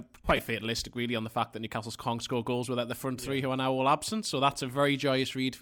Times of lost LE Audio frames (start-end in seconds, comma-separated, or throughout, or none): 0.37-0.39